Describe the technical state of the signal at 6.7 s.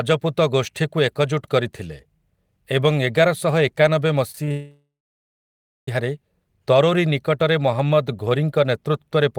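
At 6.7 s the speech signal is intact, with no audible technical fault at that moment.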